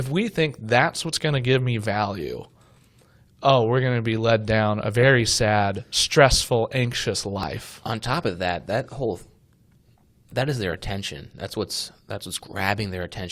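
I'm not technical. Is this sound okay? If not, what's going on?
No. An overlap between stream segments at 7.43 s: two pieces of the stream claimed the same moment, so the player trimmed real speech there, causing a tiny skip.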